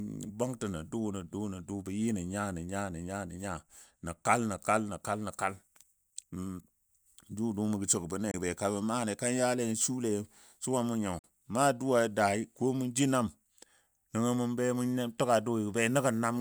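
At 8.31 s the speech just cuts out for about 23 ms, and at 11.19 s it does it again for roughly 46 ms, through 11.24 s. Both gaps are clean holes with abrupt edges or a very short fade, and when the sound comes back it has moved on, as if it kept playing. That's a classic Bluetooth dropout, most likely packets arriving too late and getting discarded. The lengths fit one lost packet the first time and two the second.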